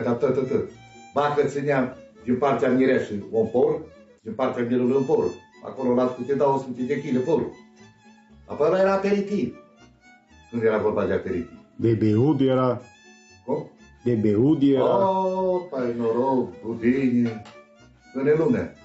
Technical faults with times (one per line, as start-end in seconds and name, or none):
0.00-18.85 gain pumping